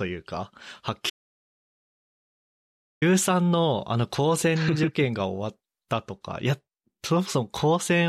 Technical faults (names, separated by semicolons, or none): audio dropout to silence